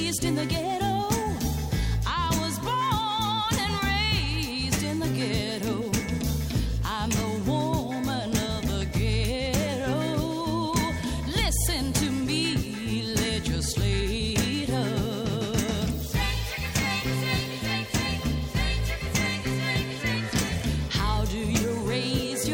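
Nothing in this recording stands out as a fault, so there's nothing to flag anywhere along the way.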